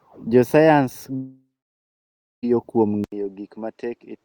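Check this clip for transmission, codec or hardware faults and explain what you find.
Two faults are audible in this speech recording: a long network dropout and a switch to a poorer input device.

From 1.15 s to 2.45 s there is a long network dropout. Roughly 1.3 s of audio likely never reached the receiver. The receiver stretched the last sound into a fading buzz for about a third of a second. Then nearly a second of silence follows. Speech resumes at 2.45 s. The lost stretch is simply gone.

At 3.04 s the input switched to a poorer device. There is an 80 ms gap at the change. After it, nothing above 8.5 kHz remains, so the speech turns dull and boxy. The level falls by roughly 10 dB. A faint new background noise sits well below the speech. This likely reflects a change to another microphone or a headset call profile. The degraded sound lasts to the end.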